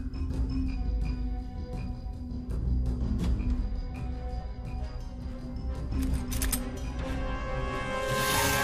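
No technical faults are audible anywhere in the recording.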